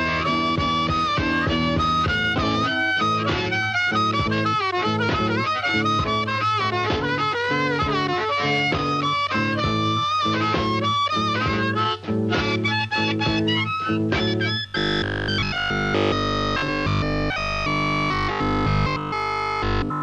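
Everything from 14.68 s to the end at 20.02 s collapses into robotic sound from repeated short buffers. The audio turns into a rigid, metallic buzz pinned at 50 Hz, and essentially all of that stretch is repeated material rather than fresh signal. The likely cause is input arriving too slowly, so the playback side keeps looping the last chunk it has. A 50 Hz buzz fits a 20 ms chunk being replayed while the real audio gets skipped.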